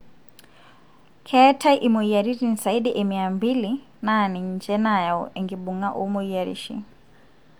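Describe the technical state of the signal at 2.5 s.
The speech at 2.5 s is intact, with no audible technical fault at that moment.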